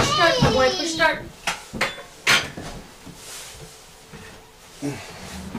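From 0.00 to 1.09 s, hard clipping drives peaks about 6 dB past the ceiling, so the waveform shows flattened tops, the spectrogram shows high harmonic smear, and loud moments sound crackly.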